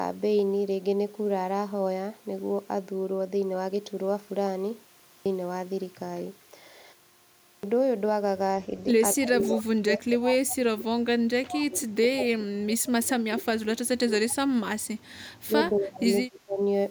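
At 5.14 s and again at 7.52 s, speech resumes with its opening sounds missing, about 115 ms lost each time, after pauses of only 0.36 s and 0.66 s. This is a clipped start after a pause: the output device dropped into a low-power state during the gap and needed time to wake and lock before passing sound again. Unlike a muted pause, where the background fades out and returns before speech with nothing lost, here the speech itself begins mid-sound, abruptly out of silence.

From 9.15 to 11.13 s the speech dips repeatedly, thinning and breaking up in pieces for about one and a half seconds in total, falling by as much as about 30 dB. This is speech suppressed in double talk, likely because both ends were talking at once and the echo canceller, unable to separate its own talker from the loudspeaker echo, turned everything down. The same chopping recurs from 11.38 to 14.74 s, about three seconds affected, again down by up to about 30 dB. 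It then appears from 15.47 to 16.06 s, shallower at about 20 dB, and from 16.26 to 16.59 s, about 30 dB. What marks it out is that the talker's own speech is cut, not just the room sound.

At 9.46 to 9.51 s a brief, faint copy of the speech surfaces about 232 ms behind the original, roughly 25 dB down. This is an echo leak, likely residue the far end's canceller failed to remove from its loudspeaker pickup and sent back. A delayed duplicate like this is the giveaway; suppression only removes sound and never adds any.

From 15.03 to 15.18 s the background alone drops by about 12 dB for roughly 150 ms and then returns. This is background gated by the echo canceller, which clamped the microphone while the loudspeaker played. It is a momentary duck during activity, not the pause-length fade of a muted pause.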